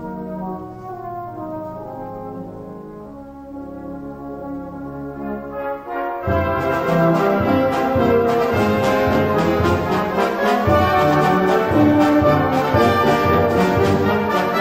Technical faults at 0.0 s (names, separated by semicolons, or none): none